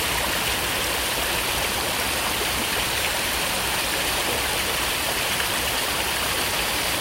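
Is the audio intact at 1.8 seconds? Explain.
No. Just before that point, at about 1.75 s, there is a brief jumbled flicker. This is chunks out of order: a short piece of audio, about 5.8 ms long, arrived one chunk late and played after the piece that should have followed it. Nothing is missing, but the swapped order leaves three hard joins where the waveform jumps abruptly, and those joins cause the momentary garble.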